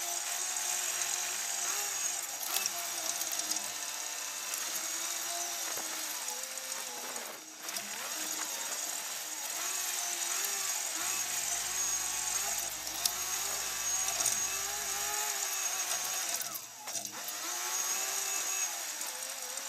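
From 10.99 to 15.13 s there is video or display buzz. A screen or video cable is coupling into the audio path. It gives a 50 Hz buzz with hash above it, plus a thin 15.6 kHz whine, sitting roughly 20 dB below the sound.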